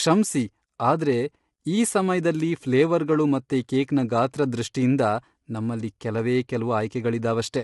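Throughout, the speech sounds rough and grainy, with nothing above 11.6 kHz. This is likely low-delay AAC compression, whose short frames blur harmonics at a low bitrate near 32 kbps.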